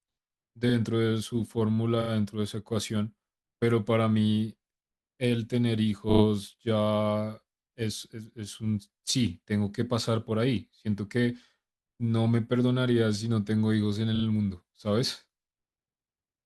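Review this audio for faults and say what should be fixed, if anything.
Repeated frames stutter the speech at 0.69 s, 2.01 s, 6.09 s and 14.15 s. Each time, the same 40 ms slice, which fits two compressed frames, plays again, once, twice, three times and twice respectively, stretching the timeline by 40 to 120 ms. Unlike a dropout, nothing goes missing; identical sound recurs. To prevent it, fix the writer or transport so no frame is emitted twice.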